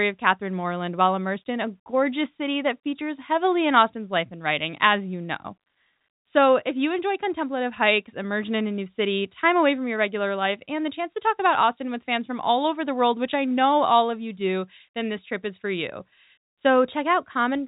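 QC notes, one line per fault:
No faults found; the speech carries the usual G.711 telephone-band character, with nothing above 4 kHz and only a faint grain that tracks its level.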